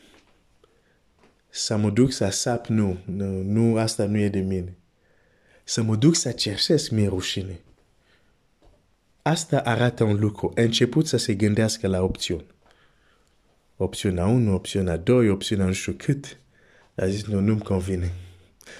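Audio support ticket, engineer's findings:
Speech signal checked across the whole clip with nothing found to report; no technical fault audible at any point.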